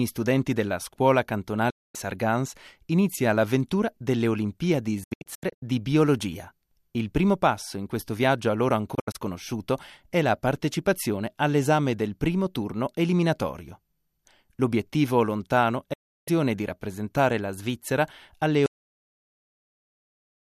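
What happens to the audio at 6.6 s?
Nothing goes wrong at 6.6 s; the audio plays through that moment intact, with no dropout, click or other fault.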